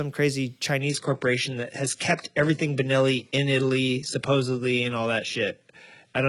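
At 0.81 s the speech drops abruptly to an adaptive stream at a lower bitrate, with no gap, and stays there to the end. Nothing remains above about 11.1 kHz, and the treble is cut with added codec artefacts, which fits a switch from 96 kbit/s AAC-LC to 12 kbit/s HE-AAC.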